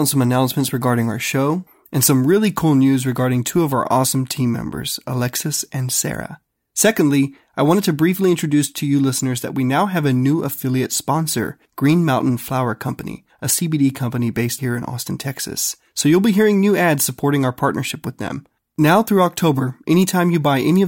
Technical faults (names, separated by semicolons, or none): none